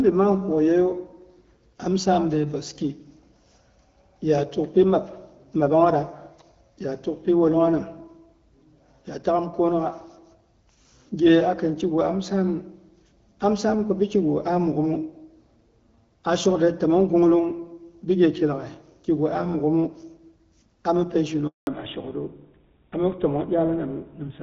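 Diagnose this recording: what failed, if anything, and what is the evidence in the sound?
Network stage: a handover gap at 21.47 s. The speech dies away within a few tens of milliseconds and stays silent for 200 ms until 21.67 s. The call is being moved between networks and no speech frames arrive during the switch, so anything said in that window is lost.

Codec stage: fallback to narrowband from 21.67 s to the end. Before the gap, the HD Voice band carries only light coding damage, which fits AMR-WB at 12.65 kbit/s. After it, nothing above 4 kHz remains and the voice turns duller and rougher, consistent with GSM full rate.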